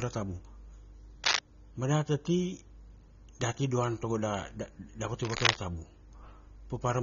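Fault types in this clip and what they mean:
AAC compression: The speech comes through dull and a bit smeared, with nothing at all above 7.4 kHz and a fizzy, warbly edge on sibilants and held sounds. That pattern is most likely AAC-LC squeezed hard, which fits a low bitrate around 24 kbps. At that rate the encoder drops the top of the spectrum and spends too few bits on what's left, so the damage is plainly audible throughout.
Cable scratch noise: Two short bursts of dense, uneven crackle sit right over the speech, from 1.24 to 1.39 s and again from 5.23 to 5.58 s, the second one lasting about twice as long. Both are roughly 5 dB louder than the speech itself. The cause is likely a worn cable or connector being moved, so the contact resistance flickers and throws scratchy, rustling noise into the signal for a moment.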